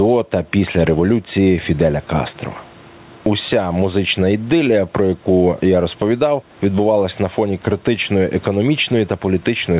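Gain pumping runs through the whole clip. The gain swings by around 10 dB. Gain was likely set far too high, with a fast limiter pulling it down. Loud and soft parts sound squashed together.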